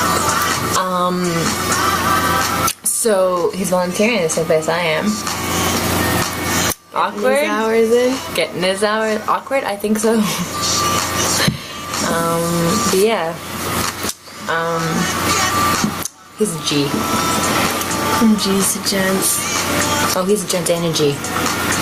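Gain pumping runs right through: the level ducks by something like 25 dB under each loud sound, likely from a fast limiter fighting a far-too-hot input.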